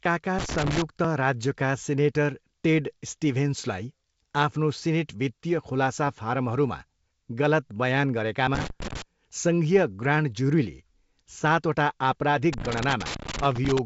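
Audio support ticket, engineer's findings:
Loose connector crackle, three bursts: 0.39–0.82 s, 8.55–9.02 s (ends right before "सङ्घीय ग्रान्ड ज्युरीले"), and 12.53–13.79 s, the longest, running almost to the end. Irregular scratchy crackle. Probable culprit: worn or dirty jack or cable contact making and breaking as it moves. Signal gets chopped, and any DC on the line turns each break into a pop. Reseat or swap the lead first.

Bit errors on an ADPCM link, 6.07–6.09 s. Short rough pop with a quick level wobble. Clip also passes through G.722 at 64 kbit/s, the wideband path with clear band up to 7 kHz. Flipped bits, rate low, roughly a tenth of a percent, sound like about two frames hit. Each error throws off the decoder's step size and predictor, so the damage rings on a few ms past the bad bits. Check the radio or transport link carrying the stream.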